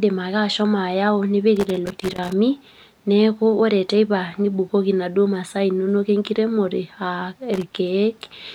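Loose connector crackle at 1.56–2.33 s and 7.54–7.72 s: a bad contact chops the speech into scratchy bursts, seen as ragged waveform dropouts and broadband vertical spectrogram streaks.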